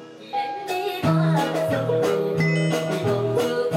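From start to finish the audio runs fast and sits high, the signature of a wrong sample rate. The samples are clocked out faster than they were captured, with no resampling in between, so duration shrinks and pitch rises by the same ratio: about 1.38 times normal speed and 5.55 semitones up. That ratio fits material recorded at 32 kHz being played back as if it were 44.1 kHz, giving the whole clip a uniformly hurried, raised quality.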